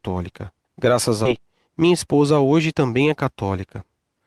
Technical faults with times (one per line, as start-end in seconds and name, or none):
1.25-1.27 skip ahead
1.39-3.25 jitter buffer speed-up